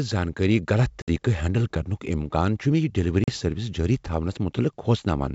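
At 1.02 to 1.10 s and again at 3.24 to 3.30 s, the speech drops into hard-edged silent gaps of about 60 ms and 40 ms, then resumes slightly distorted before settling. This is packet loss on an ADPCM call: a few packets vanish, and the decoder's predictor loses track of the sender's.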